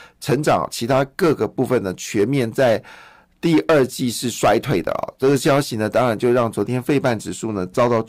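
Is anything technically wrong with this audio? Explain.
Yes, there's hard clipping running through the whole speech clip. The signal hits a stage about 12 dB hotter than it can handle, so every peak gets sliced flat at the ceiling, something like a few percent of the samples. Those squared-off tops throw a spray of high harmonics well up the spectrum, so the loud parts of the speech come out with a harsh, gritty fuzz instead of clean transients. It's not just occasional crackle; it's on pretty much every loud moment.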